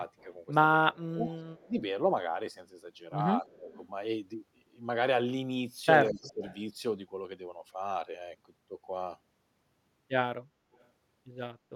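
At 0.18 to 0.24 s a faint delayed copy of the speech appears, trailing by 213 ms and sitting roughly 35 dB below it. This echo leak is likely residue that a loudspeaker-side echo canceller failed to remove. It returns at 1.56 to 1.69 s, 3.69 to 3.79 s and, loudest at about 25 dB down, 6.1 to 6.6 s. On a spectrogram it shows as weak, smeared copies of the harmonic bands, offset in time.

At 0.84 to 1.28 s the speech dips by up to about 20 dB. This is speech suppressed in double talk, likely from the canceller attenuating this talker while the far side also spoke. It recurs at 1.66 to 1.75 s (around 15 dB), 3.44 to 3.69 s and 6.11 to 6.43 s. The waveform envelope sags or gaps there.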